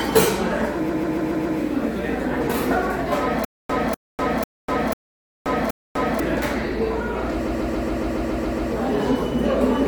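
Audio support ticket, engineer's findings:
Repeated frames. Stutter at 0.88–1.58 s, 5.16–5.44 s and 7.46–8.71 s. The same 139 ms block replays 5, 2 and 9 extra times. Compressed frames were written or sent more than once. The block spans six frames. It adds about 0.70 s, 0.28 s and 1.25 s.

Stutter with silent gaps, 3.45–6.20 s. A 247 ms burst returns 5 times. Each burst is followed by about 248 ms of digital silence, so it repeats every 495 ms. This is likely a player or stream stall that replays the last fragment on each retry and then runs dry. The audio from that span is lost.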